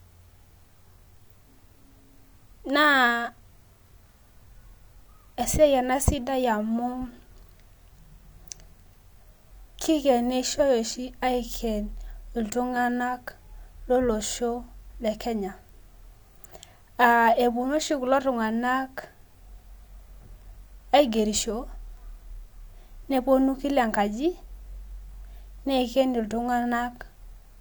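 No technical faults turn up anywhere in the speech recording. Nothing in the audio calls for a timestamp or a closer look.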